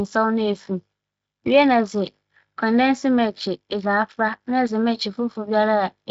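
No technical faults occur anywhere in the speech, so there is nothing to place in time order.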